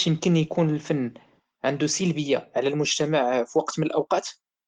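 The speech carries no technical faults, and its spectrum stops near 16.6 kHz with only light coding damage, which fits Opus in hybrid mode at around 20 kbps.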